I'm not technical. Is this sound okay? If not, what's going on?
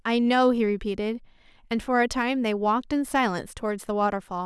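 Yes, no faults heard.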